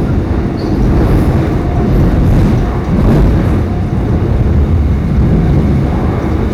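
Everyday sounds, and hard clipping runs through the whole recording. The signal was driven about 13 dB past what the converter or processing stage could pass, so every loud peak is sliced flat rather than rounded. Roughly a tenth of the samples sit at that ceiling. The squared-off tops generate harmonics high in the spectrum, heard as a harsh, buzzy fuzz riding on each louder event instead of occasional crackle.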